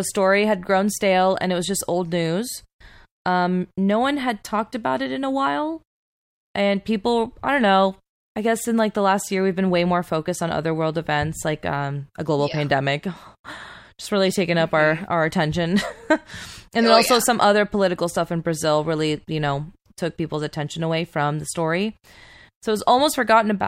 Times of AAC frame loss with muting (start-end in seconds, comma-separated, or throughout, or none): none